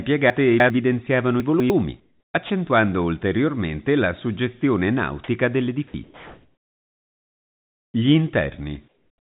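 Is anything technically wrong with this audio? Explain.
Yes. The speech has three kinds of fault. It passes through a narrowband call path that leaves nothing above 4 kHz, which fits G.711 mu-law.

Chunks out of order, at 0.3 to 0.7 s and 1.4 to 1.7 s: a block of audio arrived or was written late and played after the material meant to follow it. The jumps point to 100 ms chunks displaced by roughly three and then two chunk positions. Nothing is missing, but the sequence is scrambled, so each spot sounds like a brief jumbled stutter.

Comfort noise in place of the background, at 2.0 to 2.34 s, 6.04 to 7.94 s (right after "ulteriormente la suggestione nautica") and 8.88 s to the end: the sender likely stopped transmitting during pauses, and the receiver filled the gaps with synthetic noise shaped to the background. The real room tone, sitting about 68 dB below the loud parts in the first two pauses and about 51 dB below in the last, becomes a flat, featureless hiss. 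It is about 2, 4 and 6 dB quieter respectively.

Sound dropped by the voice detector, at 2.46 to 2.5 s, just before "ulteriormente la suggestione nautica", and at 5.88 to 5.94 s, just after it: the sender's detector likely mistook part of the sound for background and cut transmission. Comfort noise stood in for 40 ms and 60 ms of real sound. That audio is simply gone, heard as a tiny hole filled with steady noise before the speech resumes.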